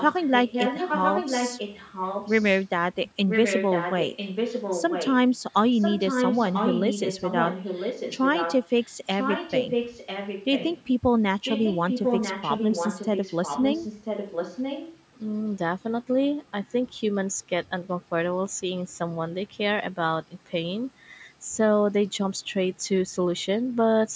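Echo leak runs through 0–2.65, 3.29–5.3, 5.5–5.54 (barely audible), 5.8–8.96, 9.13–10.84 and 11.44–14.94 s. A copy of the speech comes back about a second late, only slightly quieter, likely from a loudspeaker's echo canceller letting it through.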